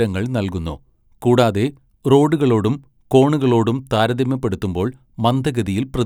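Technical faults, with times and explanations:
Nothing stood out on listening to this recording.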